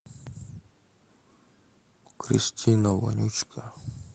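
Between 2.77 and 2.95 s, a short run of packets went missing, and the decoder filled the gap with the low-bitrate backup copies carried in the packets that followed. This is a lost packet rebuilt from error correction. About 100 ms of audio was reconstructed this way, and it sounds grainier and noisier than the speech around it, with no silence or dropout. The call path's band limit of roughly 8 kHz is present before and after that stretch.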